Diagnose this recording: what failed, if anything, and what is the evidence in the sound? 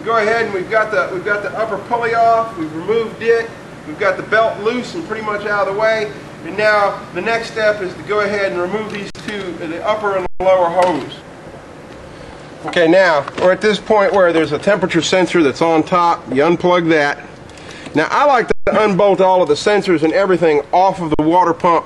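Buffer stage: underrun with held sample at 9.10, 10.26, 18.52 and 21.14 s, lasting 0.05 to 0.15 s. The waveform flatlines at a held level and the spectrogram goes blank. Playback then resumes softly where it paused, and the 0.05 s gaps fit a 2048-sample buffer.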